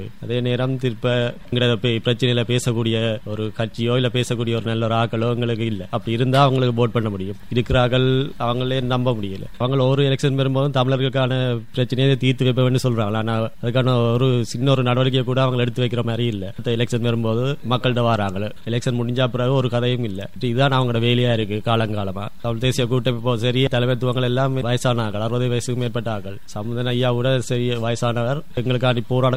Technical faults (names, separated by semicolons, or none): none